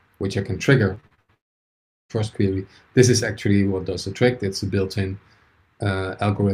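Repeated packet loss (robotic sound) runs from 0.95 to 1.30 s. Audio data went missing again and again, and each hole was patched by stretching out the preceding sound. About half of this span is that filler, with gaps up to 87 ms, so the sound turns choppy.

A long network dropout follows from 1.34 to 2.11 s. The sound cuts out and almost all of this 0.77 s stretch is silent before the audio resumes further along, with the missing part never played. The likely cause is a network interruption that kept any audio from arriving during that time.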